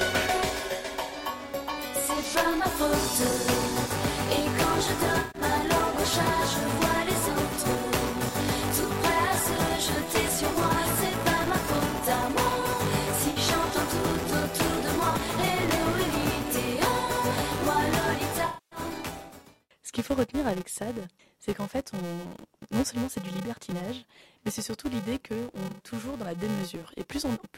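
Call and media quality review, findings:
Filter restarted on every block, throughout: a 345 Hz buzz tracking signal level, consistent with a 128-sample block. The filter state resets each block, so every block starts with a tick.

AAC frame loss with concealment at 5.19–5.41, 13.29–13.38, 18.46–18.79 and 25.67–25.88 s: smeared, noisy patches where the decoder rebuilt the missing frames from the last good spectrum.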